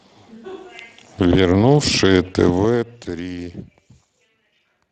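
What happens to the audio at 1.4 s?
At 1.4 s the speech carries Speex codec damage, which runs through the whole clip rather than starting at that moment. The degradation is plainly audible, consistent with a Speex setting around 22 kbps. This CELP coder models each short frame with a predictor and a coded excitation. With too few bits for the excitation, the residual comes out rough, giving a hoarse, noisy grain. Any content above 8 kHz is reduced to a shaped, noise-like fill.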